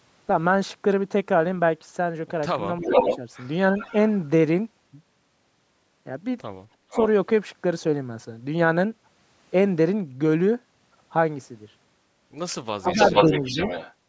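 Speech in which the talker's voice sinks abruptly at 2.67 to 2.91 s, again at 12.76 to 13.1 s, and once more at 13.27 to 13.58 s. The worst dip is the one near 12.8 s, where the voice nearly vanishes, while the one near 13.3 s is only a slight sag. This is speech suppressed in double talk: both ends were likely speaking at once, and an echo canceller that couldn't tell the local talker from loudspeaker echo turned everything down for brief stretches of a tenth to a fifth of a second. Partly overlapping these dips, a delayed copy of the voice surfaces at 2.82 to 3.17 s, 3.77 to 3.93 s, 6.91 to 7.07 s and 12.86 to 13.94 s, trailing the original by 393 ms in the first two and 431 ms in the last two. The first copy is actually louder than the speech, the second is faint, the third fairly quiet, and the long final one only a little below the voice. That is echo leak, likely from a far end on a loudspeaker whose canceller let part of its microphone pickup return down the line. 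Just before the third echo, at 6.77 to 6.91 s, the room sound itself drops by about 12 dB for a moment and then comes back. This is background gated by the echo canceller, which clamped the microphone hard while the loudspeaker was playing and released it once playback stopped.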